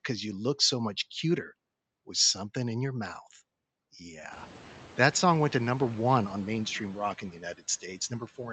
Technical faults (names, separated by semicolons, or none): speech cut by the noise suppressor